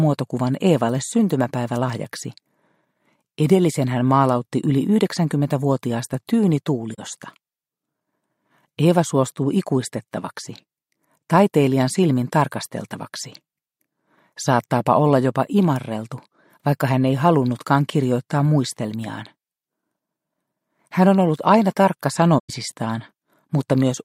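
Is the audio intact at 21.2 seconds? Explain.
Yes, the audio at 21.2 seconds is intact, with no dropout, click, distortion or other fault at that moment.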